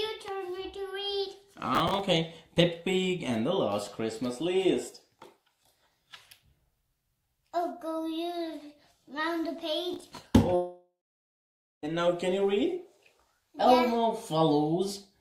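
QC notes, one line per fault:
1.75–2.00 s and 9.93–10.17 s, processor overload crackle: the processor missed a run of buffer deadlines, roughly ten and then about fifteen in a row, which fits buffers of around 10 ms. Each miss replays stale audio with hard edges, so the sound turns gritty and crackling, then clears.
10.55–11.85 s, long network dropout: about 1.28 s of audio likely never arrived over the network. The receiver stretches the last sound into a fading buzz for roughly a third of a second, then about 0.91 s of silence follows before the sound resumes with that stretch missing.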